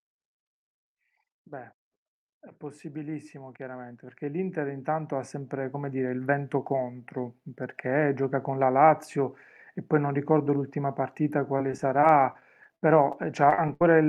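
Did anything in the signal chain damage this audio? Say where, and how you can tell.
Yes, two stages left marks on this speech. First, call processing: from 2.32 s to 7.49 s you can hear automatic gain rising. The level climbs by about 15 dB, and the background noise swells right along with the voice. That tells you it's the AGC deciding the input was too quiet and slowly turning up its gain. A talker getting louder wouldn't drag the noise floor up with them like that.

Second, the network: between 11.45 s and 13.81 s there's repeated packet loss, giving that choppy, robotic sound. There are 14 separate holes, the longest about 66 ms, and each one gets patched by stretching the previous sound. Altogether about 280 ms goes missing, so roughly 12 percent of that stretch is rebuilt. With gaps coming back to back like that, the fill-ins sound broken up.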